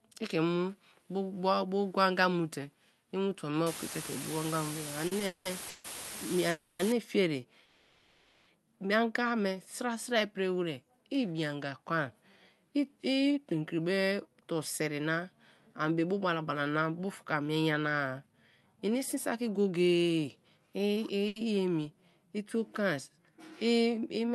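A speech recording carried over a WebRTC call path using Opus at 48 kbps, whose 12 kHz bandwidth shows on a spectrogram as energy ending at that frequency, with several distinct faults. From 3.67 to 6.92 s the audio has low bit depth with dither. With only 5 bits, the rounding error becomes a steady, even hiss roughly as loud as the speech itself. A spectrogram shows a flat broadband noise floor filling the whole band for that span, and there is no harmonic distortion. Inside that span, from 5.07 to 5.86 s, repeated stalls (stutter) occur. Four times the jitter buffer ran dry and the receiver extended the last sound, adding 390 ms in total and about half the span. The longest hold is 190 ms. The waveform shows short stretches repeating or smeared, and the speech drags without losing anything. Two call audio freezes follow, at 6.50 to 6.81 s (290 ms) and at 7.65 to 8.48 s (810 ms). The sound hangs as a sustained, fading continuation of the last sound and then resumes where it stopped. 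This is likely caused by delayed packets emptying the buffer. On a spectrogram these appear as smeared, horizontally stretched bands. Jitter buffer speed-up runs at 13.17 to 15.20 s (110%), 15.72 to 18.34 s (108%) and 19.15 to 21.23 s (110%). Each pass trims about a fifth of a second of pitch-period slices to shrink an overfull buffer, so the speech sounds hurried at unchanged pitch. Syllables look compressed in time on the waveform. Finally, from 21.28 to 21.38 s, a short stall from a late packet stretches a sound by 80 ms. It is heard as a brief held buzz or dip and shows as a short smeared patch.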